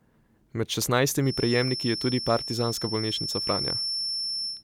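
A feedback whistle runs from 1.18 s to the end of this speech clip: a thin, steady tone at 5.4 kHz sits a few decibels beneath the speech and swells and fades slowly in level. The likely cause is a loudspeaker-to-microphone loop held just at the edge of feedback, so this single high frequency keeps recirculating and sustaining itself without building into a full howl.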